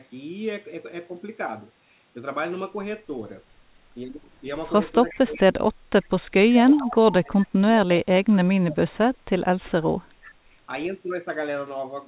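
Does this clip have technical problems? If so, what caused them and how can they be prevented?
Yes. Echo leak occurs at 5.09–5.18, 5.34–5.40, 6.73–6.89, 8.71–8.75 and 10.24–10.31 s: brief, faint delayed copies of the voice trailing 363 ms behind, roughly 20 to 30 dB below the speech. The likely cause is a far-end loudspeaker whose echo canceller let part of the returning signal through. Prevention: use a headset, or give the echo canceller a correct delay estimate and enough time to converge.

Speech suppressed in double talk runs from 5.13 to 7.88 s and from 8.18 to 10.09 s. While both sides overlap, the talker dips in pieces, at worst by around 30 dB. This likely comes from the echo canceller mistaking near-end speech for echo and attenuating everything. Prevention: tune the suppressor's double-talk detection to be less aggressive, and reduce loudspeaker pickup so less suppression is needed.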